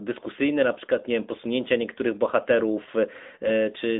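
The speech has passed through an AMR narrowband mobile codec for its whole length. It was squeezed into an 8 kHz-sampled phone channel and rebuilt from a vocal-tract model fed by sparse pulses. Nothing survives above about 3.8 kHz, and the usable band sits near 200 Hz to 3.6 kHz. The voice is thin and muffled, with a plainly audible buzzy, synthetic edge that fits a mid-rate mode around 10 kbps.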